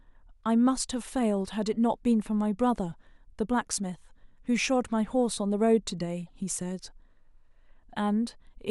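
At 6.27 to 6.30 s the speech carries a corrupt frame decoded, a burst lasting about 28 ms. Flipped bits inside the compressed data led the decoder to misread gains and spectral codes, and it played the damaged data as though it were valid, placing energy at frequencies where none belonged. The duration points to a short run of consecutive frames being hit. It sounds like a faint blip or brief chirp, peaking at only about -50 dBFS.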